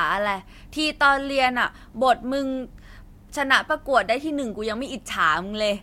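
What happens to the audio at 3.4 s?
Nothing goes wrong at 3.4 s: the speech there plays through cleanly, with no dropout, click, distortion or other audible fault.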